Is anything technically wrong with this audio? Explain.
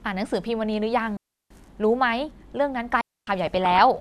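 Yes, there are two kinds of fault in this speech: two digital wireless dropouts and a short stretch of DAB burbling.

The digital wireless dropouts run from 1.17 to 1.50 s, a hole of about 0.34 s, and from 3.01 to 3.27 s, about 0.26 s. In each, the radio link lost more data than the receiver could repair, so it muted rather than pass on corrupted audio. The sound drops to near silence through a very quick fade and returns just as cleanly. Analogue wireless fading would bring hiss or crackle, but these holes have no noise burst on either edge.

The DAB burbling comes from 3.47 to 3.80 s. Weak reception let bit errors slip past error correction into the MP2 audio, at a rate probably below one percent. The damaged sample values put short blips of noise into single sub-bands, and damaged scale factors make sub-bands jump in level for up to a frame, and the pattern fits more than a dozen frames being hit. 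It is heard as burbling over the speech. Ordinary low-bitrate coding gives a steady swirl, whereas this is erratic, patchy and confined to that third of a second.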